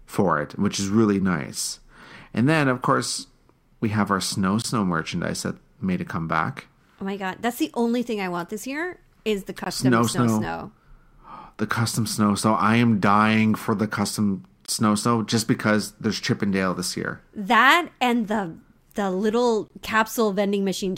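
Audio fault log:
4.62–4.64, 9.64–9.66, 14.66–14.68, 19.68–19.70 s: gap between chunks. The speech breaks into 5-second chunks, each joined by a 20 ms silent hole.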